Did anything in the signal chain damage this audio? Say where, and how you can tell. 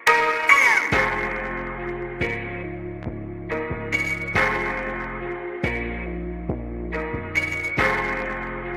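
Yes, a loud pop at 3.03 to 3.06 s, a few dB above the signal, likely a voltage transient in the analogue wiring; the sound continues underneath rather than dropping out.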